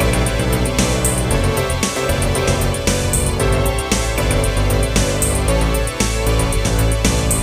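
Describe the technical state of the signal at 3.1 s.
At 3.1 s the signal is intact, with no audible dropout, distortion, clipping or other fault at that point.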